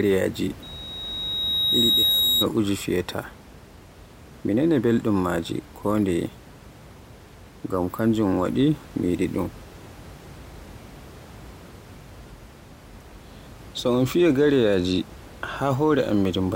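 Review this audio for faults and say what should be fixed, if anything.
Loudspeaker feedback squeal from 0.62 to 2.47 s: the microphone picked up its own loudspeaker, and at 3.8 kHz the loop gain rose above one, so that frequency fed on itself. A piercing tone swells over about a second and a half until it roughly matches the speech level. Lowering the loudspeaker gain, moving the microphone out of the speaker's coverage, or notching 3.8 kHz would prevent it.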